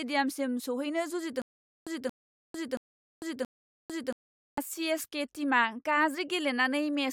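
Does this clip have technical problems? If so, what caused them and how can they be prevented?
Yes. From 1.42 to 4.58 s there's a stutter with silent gaps: a 230 ms burst repeats four times with 450 ms of silence between, likely a stalled stream replaying its last chunk. A bigger playback buffer or a steadier connection should keep it from stalling.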